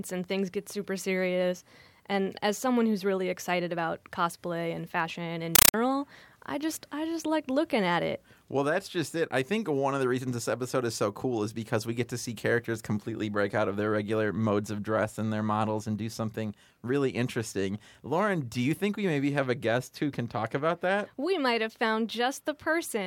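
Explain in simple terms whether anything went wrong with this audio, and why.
From 5.55 to 5.74 seconds the speech is replaced by a short blast of very loud, harsh static that chatters rapidly, about 31 times a second, each burst roughly 8 ms long. This is a compressed stream played as audio: coded audio data, which fits a Dolby Digital stream, was sent to the output as if it were ordinary sound, so the playback turned raw data into noise instead of decoding it.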